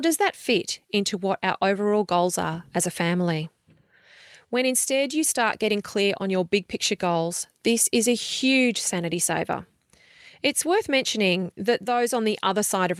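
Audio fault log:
Throughout: clock drift between sender and receiver, with the sender's clock running roughly 1.5 percent slow, so the receiver's buffer keeps draining and needs steady topping up.
0.09 to 12.81 s: repeated timing corrections, where small repeated pieces stretch the speech to 99 percent speed, adding roughly 0.2 s as faint hiccups and uneven tempo.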